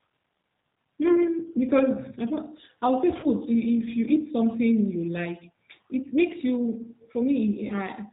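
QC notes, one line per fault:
Throughout: G.729 codec. Speech is squeezed to 8 kbit/s and rebuilt from a vocal tract model, leaving nothing above 4 kHz and a plainly rough, synthetic edge.
3.20–3.28 s and 7.67–7.73 s: VoIP packet loss concealed by the speech codec. Each gap fits one 30 ms packet going missing. The decoder stretches the last sound into a fading buzzy tone or coloured noise before the speech recovers.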